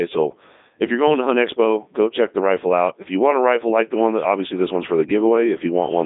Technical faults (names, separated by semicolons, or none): Codec 2 vocoder